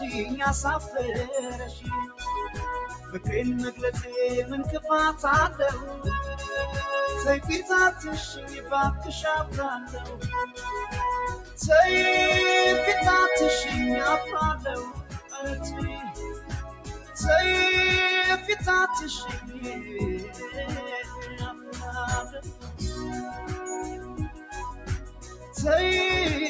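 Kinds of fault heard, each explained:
Noise suppressor applied to music or sounds: the level pumps and thins, swinging by around 10 dB, because a speech-oriented suppressor treats sustained tones and decays as noise.
Sound cut by the noise suppressor: held and fading passages sink by about 9 to 11 dB, notably from 19.4 to 25.6 s, as the suppressor mistakes them for noise.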